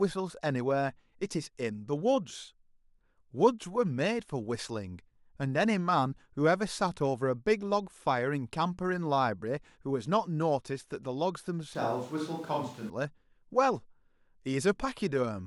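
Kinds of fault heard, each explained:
Switch to a distant microphone: from 11.75 to 12.90 s the speech abruptly turns roomy and hollow, with thinner low end, then snaps back just as suddenly, likely because the close microphone's signal dropped out and a farther one took over. Loudness stays about the same, but room noise rises to roughly 25 dB below the speech. On a spectrogram the section shows weaker low frequencies, smeared reverberant tails and a raised noise floor between words, with hard vertical edges at both switch points.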